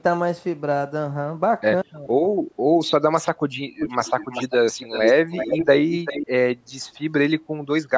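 From 3.79 to 4.53 s, 4.72 to 5.12 s, 5.3 to 5.67 s and 5.95 to 6.27 s, a delayed copy of the speech trails the original by 391 ms. This is echo leak, likely from a far-end loudspeaker whose echo canceller let residual pickup return down the line. The echo sits roughly 5 to 10 dB below the direct speech and is loudest in the middle two stretches. It is heard in bursts over the band-limited call audio, which stops at 8 kHz.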